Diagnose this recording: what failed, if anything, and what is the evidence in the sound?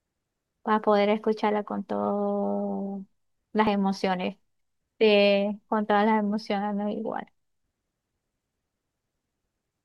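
A small jump in the speech at 3.67 s and 5.69 s, each skipping about 10 ms, are likely dropped buffers (overrun) at the driver or buffer stage.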